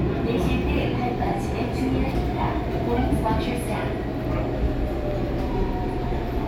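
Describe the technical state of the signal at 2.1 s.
A skip ahead occurs at 2.11 to 2.13 s. Roughly 0.4 s of audio was dropped while later audio was already queued, so playback jumps forward with no gap inserted. The two sides join almost directly, and delay shrinks by about the same amount.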